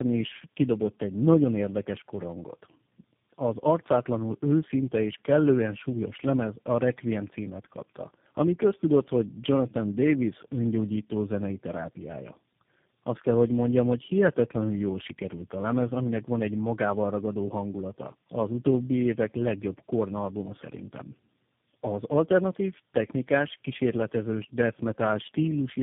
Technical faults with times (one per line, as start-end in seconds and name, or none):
0.00-25.82 tandem speech coding